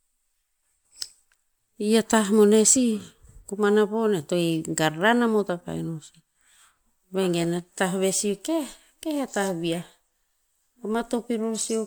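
All the way through, the speech has a swirly, smeared quality, with a hollow, phasey edge and consonant attacks that blur instead of snapping. That's generation loss, likely from the audio going through an MP3 encode and decode around four times, with each pass quantising on a shifted frame grid so the noise and spectral holes pile up. The sound points to a 128 kbit/s encode, with nothing above 20.1 kHz.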